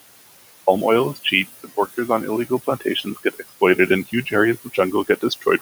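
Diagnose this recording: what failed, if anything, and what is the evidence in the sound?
Call processing: noise suppressor artifacts throughout. Steady room noise, about 15 dB below the speech, is pulled down about 19 dB frame by frame, so it sinks between words and rises under them.

Call processing: speech cut by the noise suppressor at 2.48–2.84, 3.02–3.51, 4.07–4.33 and 4.64 s to the end. Brief soft portions, mistaken for noise, drop about 16–20 dB and sound swallowed.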